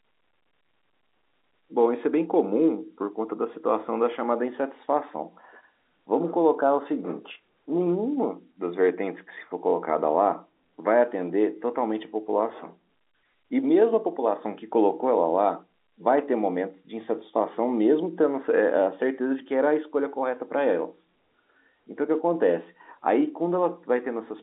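No technical faults can be heard anywhere in the clip. The speech has the narrow sound of G.711 telephone coding, confined to roughly 250 Hz to 3.7 kHz with nothing above 3.8 kHz, and any coding damage is at most faint.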